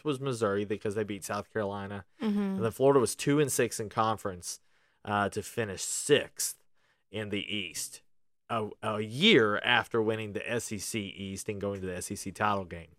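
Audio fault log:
No fault can be heard in this speech recording, so the fault log has nothing to list.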